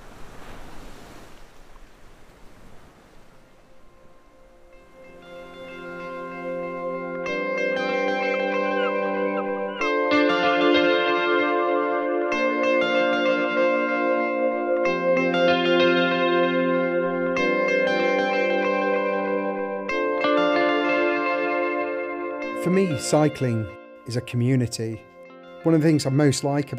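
No technical faults are audible.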